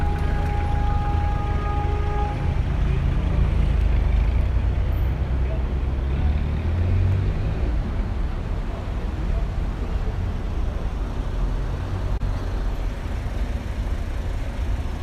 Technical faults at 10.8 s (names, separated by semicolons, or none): none